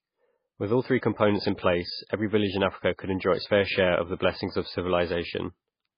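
Low-bitrate audio saved at a high bitrate, running the whole length of this speech clip: nothing is present above 5 kHz, and the speech carries the smeared, watery coding artefacts of a very starved encoder. The likely cause is a file first squeezed through a low-rate MP3 encoding, around 16 kbit/s judging by the damage, then re-saved as a much larger MP3. The second pass cannot restore the stripped highs or undo the artefacts; it merely stores them at a higher rate.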